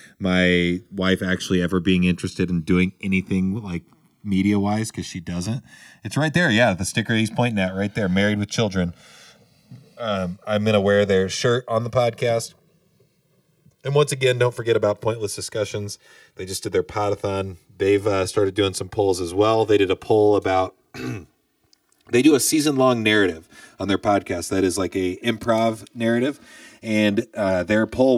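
Throughout the speech, the channels drift apart: the left and right come from devices on separate clocks, differing by around 100 ppm, so the inter-channel delay grows steadily to a few milliseconds. In mono, comb notches creep slowly one way, unlike a flanger's cyclic back-and-forth sweep.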